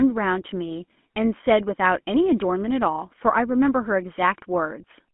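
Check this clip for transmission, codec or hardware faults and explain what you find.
One codec fault runs through the whole speech clip.

GSM full-rate codec, throughout: the encoder models the vocal tract and excites it with a coarse, regularly spaced pulse train, which fits a 13 kbps full-rate link. The band is limited to 200 Hz–3.4 kHz, and the speech carries a plainly audible buzzy, gravelly roughness.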